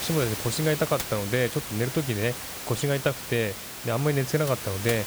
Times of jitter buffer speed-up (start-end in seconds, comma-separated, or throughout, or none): none